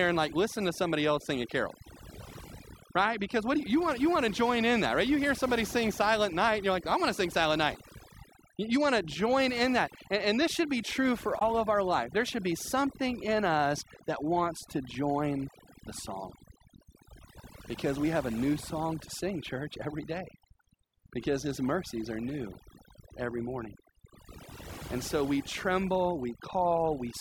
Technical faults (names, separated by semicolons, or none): overdone noise removal; damaged data in a compressed stream